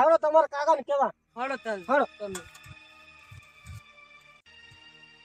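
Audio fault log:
No faults detected in this clip.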